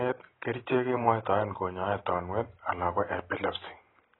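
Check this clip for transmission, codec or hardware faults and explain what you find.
The speech carries heavy AAC compression damage from start to finish. Nothing reaches above 4 kHz, so the sound is dull, and sibilants turn fizzy with a warbling smear. The likely cause is AAC-LC coding at a very low bitrate, which fits about 16 kbps. The encoder quantises each frame's frequency lines coarsely, lowers the cut-off and leaves holes in the spectrum. On a spectrogram the energy stops abruptly at 4 kHz, with patchy gaps below.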